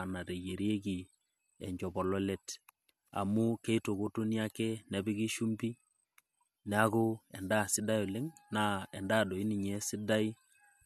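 Nothing here calls for comment, since the speech runs from its first moment to its last without any technical fault to point out.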